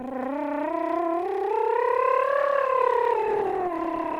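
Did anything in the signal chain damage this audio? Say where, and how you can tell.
Yes. From 2.38 s to the end of the clip, the music loses clarity and turns coarse and watery, with the top end dulled, and it never recovers before the audio stops. That is a call bitrate drop at the network and codec stage. The call's bandwidth estimate fell, so the Opus encoder was cut from 32 kbps to 17 kbps and held at that floor for about 1.55 s. With roughly half the bits, it quantises the music more coarsely and trims the high frequencies.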